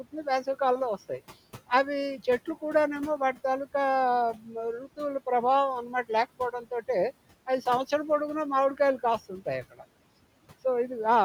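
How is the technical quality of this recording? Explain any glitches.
The recording has two related glitches, both caused by noise suppression acting on the speech.

Noise suppressor artifacts run throughout: frame by frame, the processing pulls the steady room noise (about 20 dB below the speech) down by about 18 dB, so the noise sinks between the words and rises under them.

Speech cut by the noise suppressor occurs at 4.34–4.48 s, 6.39–6.72 s and 9.71–9.84 s. There the suppressor mistook quieter speech for noise, dipping it by about 8, 12 and 13 dB, so it sounds swallowed.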